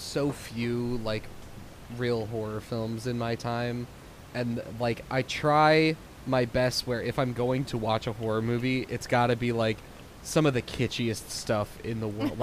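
No technical faults are present.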